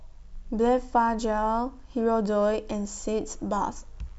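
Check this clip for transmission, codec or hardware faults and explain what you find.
No transmission, codec or hardware faults are audible here.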